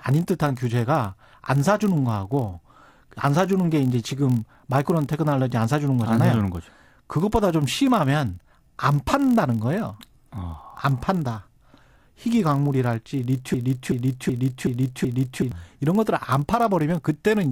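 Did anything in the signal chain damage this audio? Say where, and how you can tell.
Yes. There are two faults. The first is in the driver or buffer stage. A steady buzz at 43.1 Hz runs under the whole clip. That rate fits a 1024-sample read block. This is a block size mismatch, padded. Each block read holds slightly fewer written samples than it expects, and the shortfall is filled with zeros. Those tiny silent gaps, one per block, make the buzz. The extra gaps slow the audio to 0.999 times its speed, so it runs very slightly slower.

The second fault is a broken-record loop. It runs from 13.54 to 15.52 s. A fragment of about 376 ms repeats exactly, back to back, five times. The speech that should fill those two seconds is missing. The most likely cause is the playback or streaming stage stalling and resending the last fragment it held until fresh data arrived.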